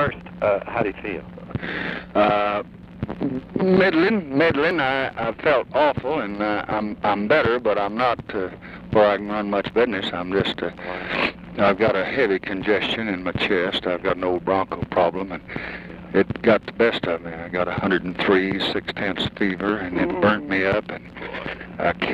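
At 4.71, 9.70, 14.70 and 19.69 s the sound skips briefly, each time losing a few milliseconds, spaced every 5.0 s, likely audio missing between chunks, with the ends butted together. A waveform shows an abrupt discontinuity at each join; a spectrogram shows a thin vertical seam.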